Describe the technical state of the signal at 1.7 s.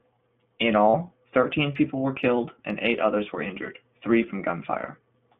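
At 1.7 s the speech carries iLBC codec damage, present throughout the clip. Each 20 ms frame is coded independently, leaving a plainly rough, synthetic texture that fits a 15.2 kbps rate. A spectrogram shows energy confined to roughly 150 Hz–3.5 kHz.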